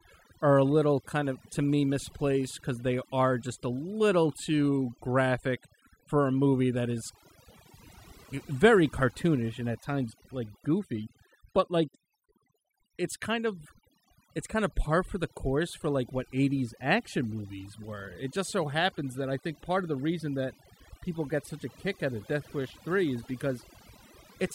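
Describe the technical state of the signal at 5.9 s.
At 5.9 s the clip shows overdone noise removal, present throughout. A noise reducer set far too aggressively is pulling individual frequency bands down or out whenever they sit near its noise estimate, taking quiet speech detail with them. The background drops and breaks up into twinkling specks.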